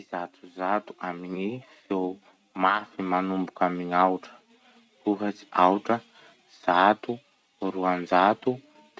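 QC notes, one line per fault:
0.11–3.92 s, automatic gain rising: the level climbs by about 9 dB over nearly four seconds as the gain control lifts what it judged a too-quiet input. Background noise swells along with the speech, which separates it from a talker leaning closer.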